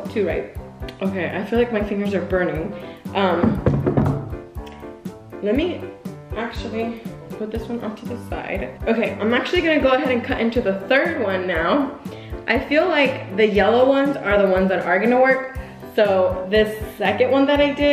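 No technical fault can be heard anywhere in this audio. Nothing in the sound calls for a time or a cause to be given.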